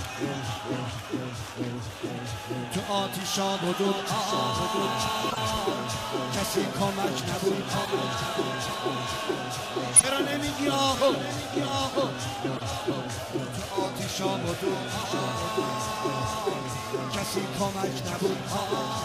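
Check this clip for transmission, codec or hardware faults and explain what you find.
The clip has one codec fault, repeated six times.

Corrupt frame decoded at 1.49–1.51, 5.29–5.38, 7.83–7.90, 9.96–10.04, 12.56–12.63 and 15.02–15.06 s: flipped bits in compressed frames were decoded anyway, putting energy at wrong frequencies. Each is a short chirp or noise burst spanning one to a few frames. The one near 10.0 s is loudest and the one at 1.5 s faintest.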